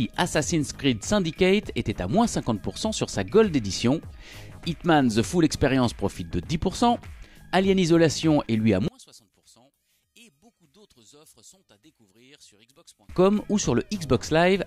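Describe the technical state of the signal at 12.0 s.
One channel is likely inverted from 8.88 to 13.09 s. When summed to mono, the shared content cancels, leaving a faint residue about 32 dB quieter.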